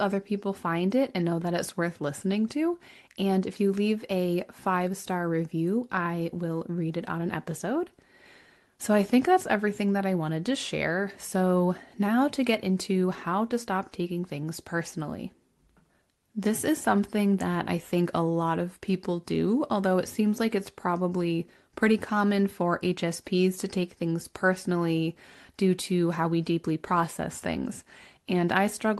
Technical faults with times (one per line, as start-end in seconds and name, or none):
none